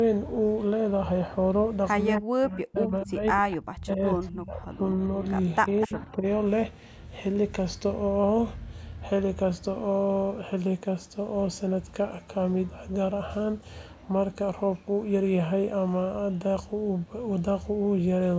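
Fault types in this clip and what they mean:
Echo leak: the far end's echo canceller let part of its loudspeaker pickup escape, and that residue returned down the line, most likely from a speakerphone setup. In this speech it shows as short, faint, delayed copies of the voice trailing by about 246 ms, at 2.17 s, 3.51 s and from 5.81 to 6.03 s, sitting roughly 10 to 20 dB below the speech.
Speech suppressed in double talk: when both sides spoke at once, the echo canceller likely failed to tell the local talker from loudspeaker echo and pulled everything down together. The voice here sinks and breaks up in patches between 2.2 and 3.23 s, dropping by as much as about 40 dB, again from 3.4 to 4.71 s at around 25 dB deep, and briefly near 5.9 to 6.25 s by about 15 dB.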